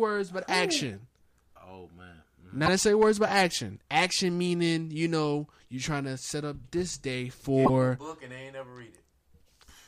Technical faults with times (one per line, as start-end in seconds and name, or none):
2.65-2.68 broken MP3 bit reservoir
7.64-7.70 broken MP3 bit reservoir